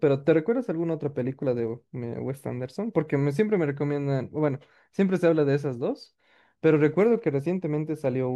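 Clock slip clicks run from 0.12 s to 8.34 s, roughly every 20 ms, so the speech carries a soft, continuous rattle rather than separate ticks, clearest on loud sustained sounds and gone in pauses. The likely cause is two devices on unsynchronised clocks, differing by around a thousand parts per million, so a single sample is dropped or repeated each time the drift adds up to a full sample.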